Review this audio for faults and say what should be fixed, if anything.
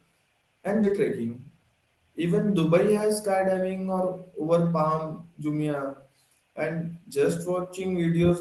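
A skip ahead occurs at 0.83 to 0.85 s: roughly 0.4 s of speech is dropped and playback jumps forward with no fill, joining the two sides almost directly. A backlog of queued audio was likely discarded when the jitter buffer overflowed. To prevent it, size the jitter buffer to absorb packet bursts rather than flushing queued audio on overflow.

Jitter buffer speed-up follows from 0.92 to 1.87 s. Playback runs at about 112% speed at unchanged pitch as short pitch-period pieces are cut repeatedly, removing roughly a tenth of a second of excess delay. The speech sounds hurried over this stretch. To prevent it, cap how much audio the buffer accumulates, or reduce the delay more gradually across a longer span.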